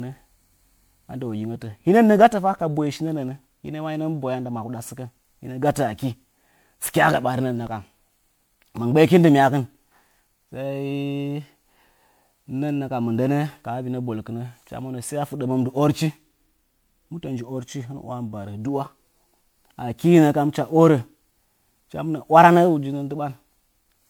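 Throughout the speech, the audio shows generation loss, most likely from being decoded and re-encoded with MP3 around seven times, with a character that fits a 128 kbit/s setting. Each pass quantises again on a shifted frame grid, so the errors pile up rather than staying put. The result sounds swirly and hollow, with smeared, softened consonant attacks and a watery texture beyond what one encode would leave. Nothing is present above 20.9 kHz.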